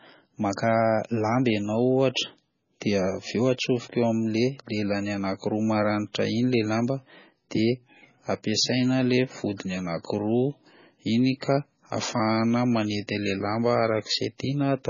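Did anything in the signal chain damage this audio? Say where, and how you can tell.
Yes, the damage comes in at the codec stage and runs through the whole speech clip: this is likely MP3 compression at a very low bitrate. The encoder has cut everything above 7 kHz, so s sounds lose their edge. Starved of bits, it drops quiet frequency lines that flicker on and off between frames, giving the heavy watery, swirling texture and smeared consonant attacks throughout, which fits a bitrate around 16 kbps.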